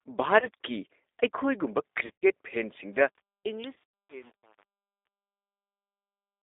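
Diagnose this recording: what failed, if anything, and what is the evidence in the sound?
G.729 codec throughout, at the codec stage: the speech is confined to roughly 300 Hz to 3.7 kHz and sounds rough and synthetic, with the plainly audible damage of an 8 kbit/s coder that rebuilds the voice from a vocal tract filter, a pitch predictor and a few pulses per frame.

VoIP packet loss concealed by the speech codec, at the network stage, at 0.40–0.47 s, 2.06–2.26 s and 3.74–3.81 s. About 20 ms, 140 ms and 120 ms go missing, the last two scattered, with gaps of up to 100 ms. The decoder stretches its last pitch and filter into a fading buzzy tone or coloured noise, and the voice stays weak afterward.

Truncation distortion on a fade, at the sample-format stage, from 2.93 s to the end and worst from 3.11 s. As the level drops through the fade-out, which begins around 3 s and ends at 6.43 s, the waveform collapses into coarse undithered steps, which fits an 8-bit stage. 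The tail sounds gritty.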